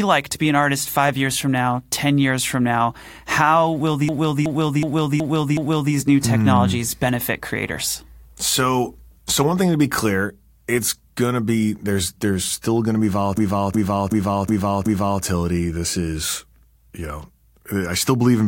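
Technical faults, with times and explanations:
4.09–5.94 s and 13.38–15.23 s, system hang loop: each time, a short fragment of the speech repeats five times like a skipping record, at about 2.7 repeats per second, before the speech carries on with essentially nothing missing. The system froze, but the sound hardware kept replaying the same ring buffer, so the same 0.37 s chunk came back identically on each pass. That length fits a 16384-sample buffer.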